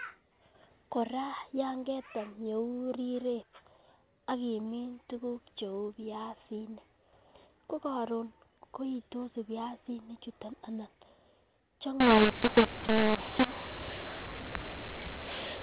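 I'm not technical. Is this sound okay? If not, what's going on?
No. From 12.00 s to the end at 15.63 s, the speech turns harsh and distorted. The quiet gaps fill with hiss. This is a mu-law and A-law mix-up. Telephone audio comes in two similar coding styles. Here it was packed one way and unpacked the other. Loud and soft parts come out at the wrong sizes, and near-silence gets pushed up into noise. Before 12.00 s, the ordinary narrow phone sound is intact.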